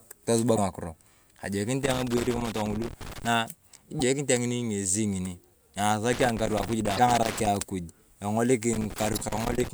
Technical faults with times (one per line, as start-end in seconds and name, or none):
0.54-0.58 damaged data in a compressed stream
1.84-3.27 loose connector crackle
3.97-4.01 damaged data in a compressed stream
6.13-7.47 loose connector crackle
6.95-6.99 damaged data in a compressed stream
8.73-9.68 loose connector crackle
9.13-9.18 damaged data in a compressed stream